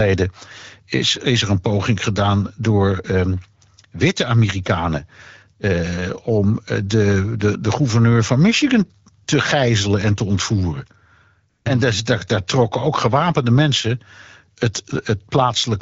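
AMR comfort noise appears from 9.23 to 9.27 s, just before "gijzelen en te ontvoeren", and again from 11.49 to 11.65 s. Both times the phone judged the line silent and stopped sending speech frames. The receiver filled the 40 ms and 160 ms gaps with smooth synthetic noise that switches in place of the real background.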